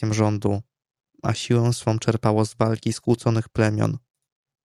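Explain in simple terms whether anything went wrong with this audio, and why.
Nothing went wrong; the speech comes through without faults.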